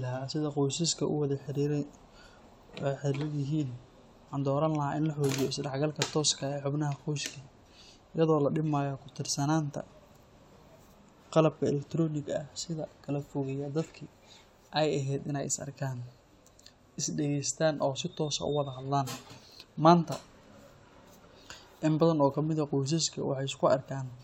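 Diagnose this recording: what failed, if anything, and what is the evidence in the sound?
No faults found in this recording.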